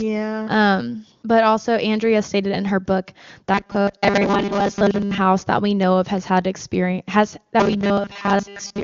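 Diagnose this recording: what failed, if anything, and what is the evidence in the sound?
The buffer stage likely ran short of incoming audio, and the software filled the gaps by replaying the last fragment over and over. That produces robotic sound from repeated short buffers from 3.54 to 5.18 s, just after "stated in her book" and before "that we know of", and again from 7.60 s, after "has had experience has", to the end. Both stretches carry a rigid metallic buzz at 200 Hz, which fits a 5 ms fragment being looped, with most of the real audio skipped. The band stops near 7.1 kHz, as expected for an AMR wideband (HD Voice) call.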